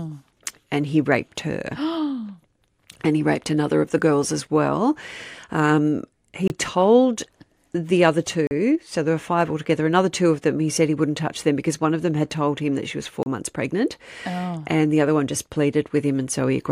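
Blocks of digital silence at 6.48–6.50 s (just before "told the other"), 8.47–8.51 s (between "told the other" and "so there were five") and 13.23–13.26 s (before "months pregnant"): output buffers likely went unfilled, dropping 24–40 ms to silence with abrupt edges, heard as short holes.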